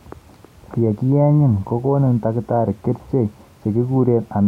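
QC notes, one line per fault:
No technical faults are audible anywhere in the speech; the signal holds steady level and continuity throughout.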